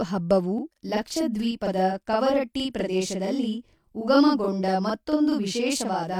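From 0.58 s to the end, the speech sounds doubled, with a same-level slap echo trailing each syllable by about 43 ms. This is channel delay (doubling): one channel runs late, consistent with a 2048-sample buffer, and is summed to mono with the other.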